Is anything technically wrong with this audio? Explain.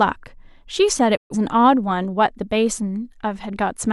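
Yes. At 1.15 s the speech fades out over about 20 ms into silence, returning at 1.35 s with that stretch missing. It is a digital broadcast dropout: the receiver muted on bad frames, losing 128 ms of programme, which fits three corrupted frames.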